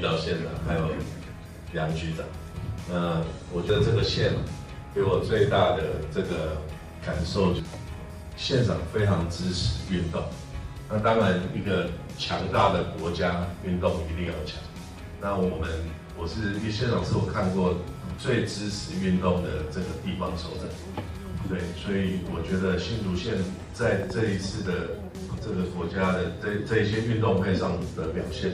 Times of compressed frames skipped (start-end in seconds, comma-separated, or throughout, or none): 3.69, 7.59, 18.18